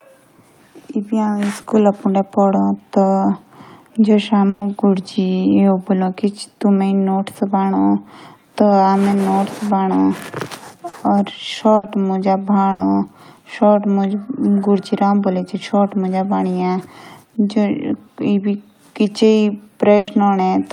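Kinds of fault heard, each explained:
Short concealed packet loss: a few packets of the call arrived too late for the decoder, so the receiver bridged each hole by extending the sound just before it, following its pitch where voiced or with shaped noise otherwise, then faded back into real audio. Here that happens twice, near 1.61 s with 20 ms patched and near 10.89 s with 40 ms patched, heard as a momentary smear or wobble where a brief sound may drop out.
Burst of packet loss: several consecutive packets went missing or came in too late to play, and the receiver covered the longer gap by continuing the last sound while turning it down, so voiced parts become a held buzz and unvoiced parts a fading hiss, with the original audio in between lost. This occurs four times: at 4.49 s for 120 ms, 11.75 s for 80 ms, 12.71 s for 80 ms, and 19.97 s for 100 ms, each resuming further along, the first and last without any silence.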